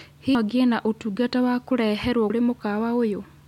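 A speech recording with two brief disruptions from damaged data in a compressed stream, at 0.35 s and 2.30 s. Each is heard as a chirp, squawk, click or short hole. At those points the encoded bytes were corrupted, so the decoder could not read the affected frames correctly, lost its place in the stream and had to search for the next valid frame header before normal decoding resumed.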